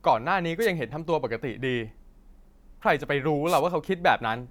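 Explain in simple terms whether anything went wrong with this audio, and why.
Two short bursts of static interrupt the speech, a wireless microphone noise hit each time. The first runs from 0.60 to 0.67 seconds. The second is longer, from 3.46 to 3.61 seconds. Radio microphones send sound over the air. Sometimes the signal bounces off surfaces, and the bounces cancel it out for a moment. The receiver then picks up its own hiss instead, heard here as a quick swish over the voice.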